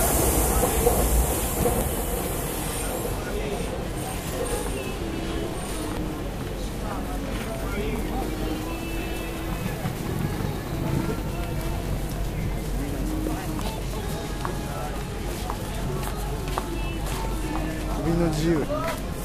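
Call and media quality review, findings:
Damaged data in compressed stream, 1.81–1.84 s, 5.97–6.00 s, 11.18 s, 13.62 s: brief blips; decoder misreads corrupted frames, loses sync, resyncs at next frame header.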